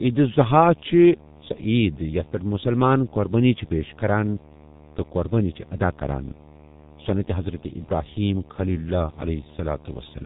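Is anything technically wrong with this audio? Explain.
Yes, two faults run through the whole speech clip.

Video or display buzz is present throughout. A screen or video cable couples into the audio, giving a 75 Hz buzz with hash above it, about 25 dB below the speech. Mains hum would sit at 50 or 60 Hz.

The G.723.1 codec also affects the entire clip. Its 30 ms frames and slow voice model leave speech heavily muffled and hoarse, with smeared consonants and nothing above 4 kHz. This fits a rate near 6 kbit/s, and the roughness goes beyond what simple band-limiting would cause.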